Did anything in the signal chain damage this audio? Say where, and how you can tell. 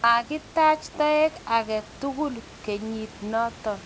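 No, the speech comes through a G.722 call path that stops at 8 kHz as that codec's band limit dictates, over room noise about 25 dB below the speech, and no stage in the chain leaves any audible damage.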